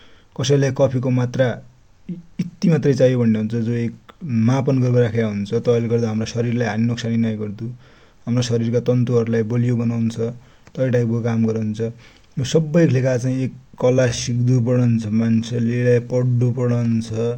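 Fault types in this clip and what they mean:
Time-stretched section: from 13.8 s to the end, the speech abruptly slows to 0.65 times its earlier pace while its pitch stays unchanged. Syllables sound drawn out and the speech drags. This is likely software lengthening the passage to fill a set duration, preserving pitch by repeating short fragments of the waveform rather than playing it back more slowly.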